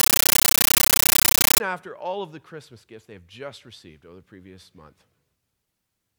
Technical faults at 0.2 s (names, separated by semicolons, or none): compressed stream played as audio